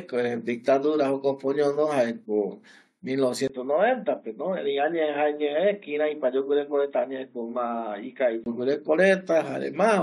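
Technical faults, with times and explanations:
3.48–8.46 s: input switched to a poorer device. A gap of about 20 ms opens at 3.48 s, and then the speech turns dull and boxy, with nothing above 3.8 kHz. The level drops by around 5 dB, and a faint new noise floor sits well below the speech. The band limit, the level shift and the changed background all point to the recording likely moving onto a narrower-band microphone or headset call profile, which then hands back to the original input at 8.46 s, where the full bandwidth returns.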